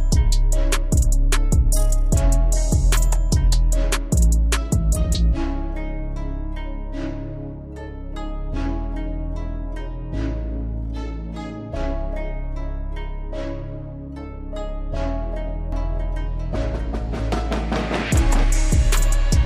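From 15.72 s to 18.44 s a doubled audio track appears: a second, full-band copy of the sound trails the original by roughly 0.7 s at about 5 dB lower. It likely comes from the signal being captured twice through a slower path. The copy sounds dry and separate, not like room reverb, and switches on and off abruptly. On a spectrogram, each feature reappears slightly fainter about 0.7 s later, and the waveform shows matching shapes stacked at that fixed offset.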